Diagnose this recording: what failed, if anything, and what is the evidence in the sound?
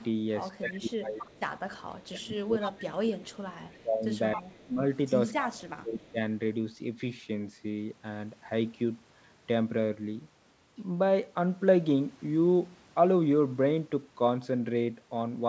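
Echo leak at the call-processing stage: a copy of the speech delayed by 269 ms surfaces at 0.0–0.07, 1.18–1.79, 2.6–2.73, 3.68–3.82 and 4.35–4.64 s, about 10 to 35 dB below the speech. This is likely loudspeaker pickup the echo canceller failed to remove.

Speech suppressed in double talk, also in call processing: the speech dips by up to about 25 dB at 0.6–1.27, 1.8–4.81 and 5.4–6.2 s. This is likely the canceller turning down its own talker along with the loudspeaker echo.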